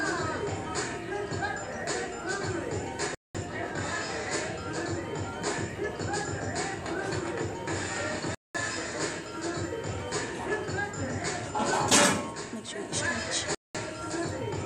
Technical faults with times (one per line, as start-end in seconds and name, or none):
3.15-3.35 gap between chunks
8.35-8.55 gap between chunks
13.55-13.75 gap between chunks